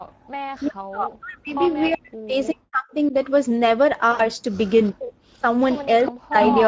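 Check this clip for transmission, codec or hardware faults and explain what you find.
The recording is a speech call with five kinds of fault: constant Speex coding damage, background gating at the start, repeated echo leak, speech suppressed during double talk, and one burst of packet-loss concealment.

Speex codec, whole clip: The coding damage is plainly audible. The speech sounds hoarse and grainy, with a noisy, slightly buzzy edge. The excitation is coded with too few bits, so fine voice detail gives way to noise. The damage level fits a middle setting near 16.8 kbps. The call path's response runs up to 8 kHz as expected. On a spectrogram, harmonics above about 4 kHz smear into diffuse, noise-like texture instead of clean striations.

Background gated by the echo canceller, 0.0 to 0.25 s: The room tone drops sharply, by about 40 dB at its deepest, for around a fifth of a second, and then returns. 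The canceller clamped the microphone while the far-end loudspeaker was active and released it afterwards. On the waveform the noise floor nearly vanishes for that short stretch. The spectrogram shows a near-blank band across all frequencies before the background fill resumes.

Echo leak, at 0.25 to 0.67 s, 1.67 to 2.54 s, 4.86 to 4.92 s and 5.6 to 6.57 s: A delayed copy of the voice trails it by 374 ms. It is very faint in the first and third spans, clearly audible in the second, and nearly as loud as the direct speech in the last. The likely cause is a speakerphone whose canceller failed to remove its own playback. On a spectrogram, the voice's harmonic patterns reappear as shifted, weaker duplicates.

Speech suppressed in double talk, 0.6 to 3.14 s, 4.92 to 5.44 s and 6.11 to 6.36 s: The voice dips, thins and breaks into pieces, by up to about 40 dB. The first span affects roughly two seconds in total, and the later ones a few tenths of a second each. 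This is likely because both sides spoke at once and the canceller attenuated the talker along with the echo. The waveform shows chopped, notched envelopes, and the spectrogram shows high frequencies dropping out first.

VoIP packet loss concealed by the speech codec, 4.11 to 4.30 s: About 80 ms of audio was lost, which fits four 20 ms frames. The decoder kept extrapolating the last pitch and filter while lowering the gain. What you hear is a brief buzzy, stretched tone fading away, followed by weak, slightly distorted speech while the decoder recovers. On a spectrogram the harmonics flatten into steady horizontal lines that fade out. The waveform shows a repetitive, decaying pattern.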